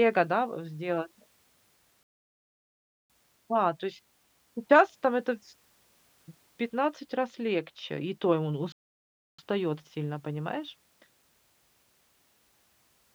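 A playback stall hits this speech clip at 2.03 s, where the sound cuts to silence for about 1.07 s before resuming at 3.10 s, and again at 8.72 s, just after "и то и он", with a gap of about 0.66 s ending at 9.39 s. Each time the sound halts in mid-flow and then carries on. The likely cause is the player running out of buffered data or its playback thread being blocked, leaving the output silent until it recovered.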